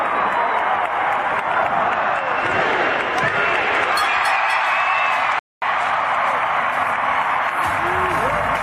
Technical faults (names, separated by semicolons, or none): rebuffering stall